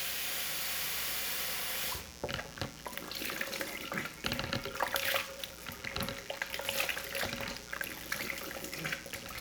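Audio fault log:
throughout, mains buzz: a raspy 60 Hz buzz sits roughly 15 dB under the sound the whole way. Sharp switching spikes leak in twice per mains cycle, so 60 Hz harmonics stack up into the kilohertz range, which gives it that edge rather than a smooth hum.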